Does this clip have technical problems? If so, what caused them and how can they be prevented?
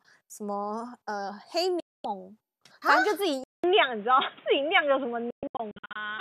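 Yes. The speech cuts abruptly to silence from 1.80 to 2.05 s, then breaks into several short holes between 5.30 and 6.01 s, the longest about 120 ms. This is digital broadcast dropout: the receiver lost frames and muted until good ones returned. Stronger reception, better antenna placement or more robust error protection prevents it.

At 3.44 s there is about 200 ms of silence, then the speech turns dull and boxy with nothing above 3.8 kHz, a level shift of roughly 5 dB and a new noise floor. The likely cause is the input switching to a poorer device. Locking the recording input to one chosen microphone prevents it.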